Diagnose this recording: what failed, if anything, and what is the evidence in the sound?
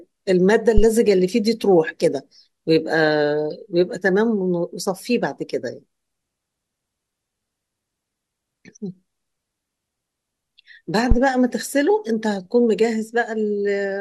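A deep, low thump hits at 0.78 to 0.87 s and again at 11.11 to 11.18 s, peaking near about -2 dBFS and dying away within 21 ms and 15 ms. This is a phantom power thump in the analogue input: the supply switching on or off on a live channel pushes a voltage step through the coupling capacitors.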